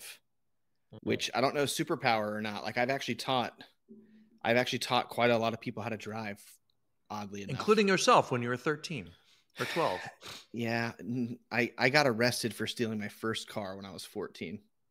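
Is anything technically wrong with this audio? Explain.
Yes. Two brief skips in the speech at 9.06 s and 14.35 s are likely dropped buffers from an overrun, where the recording software failed to collect incoming samples before the hardware wrote over them. Only a few milliseconds of audio vanish each time, and the surrounding sound is butted together with no gap. At each point there is a jump in the sound.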